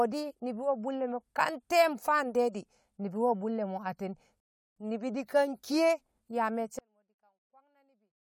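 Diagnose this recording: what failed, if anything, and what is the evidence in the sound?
At the playback stage, the player ran dry of downloaded data and paused: a rebuffering stall. From 4.40 s to 4.76 s the speech drops to dead silence, then picks up exactly where it left off, with nothing skipped. The gap simply inserts about 0.36 s of extra time into the recording. The buffer emptied faster than the network could refill it, and playback held until enough arrived to continue.

From 6.79 s to the end, the speech collapses to a faint residue, roughly 39 dB quieter than before. The likely cause is one channel inverted somewhere in the wiring or channel handling, so the two sides arrive in opposite polarity. When they are summed to mono, everything common to both, which is nearly all of this centred speech, cancels out. Only the small difference between the channels survives, leaving a faint trace of the sound.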